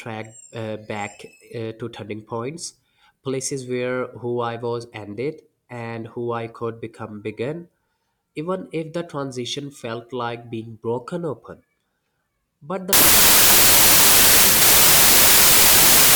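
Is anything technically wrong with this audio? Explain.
Yes, the last part of the clip is corrupted by a wrong sample width. From 12.93 s, just after "but the", to the end, bytes are regrouped three at a time instead of four, which fits 32-bit data read as packed 24-bit. Mismatched bytes produce loud noise burying the speech, slowed to 0.75 speed and lowered in pitch. A spectrogram shows a dense broadband wash, and the waveform jumps sharply in level.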